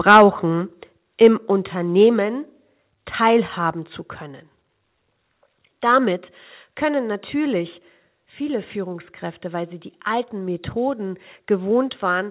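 Speech, carried over a narrowband call line where nothing reaches above 4 kHz, which fits G.711 A-law at 64 kbps. Microphone overload flattens the loudest peaks from 0.08 to 0.22 s, driven about 6 dB past full scale, with roughly a tenth of samples cut. A milder burst follows at 1.24 to 1.27 s, about 1 dB over. The cause is likely a microphone input set too hot. The microphone volume is stepped down at 0.17, 1.17, 2.19, 3.72 and 6.18 s. Each step is about 2 dB. Voice and background drop together at once. The first comes during the opening overload. This likely reflects call software lowering the device gain after detecting clipping.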